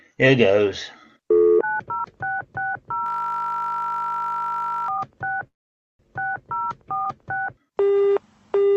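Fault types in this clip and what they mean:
System hang loop: from 3.06 to 4.88 s a single 20 ms slice repeats, producing a steady 50 Hz buzz as the frozen system cycles its ring buffer.
Call audio freeze: at 5.47 s the sound stops for about half a second, then resumes 0.52 s late with nothing lost, likely an emptied jitter buffer.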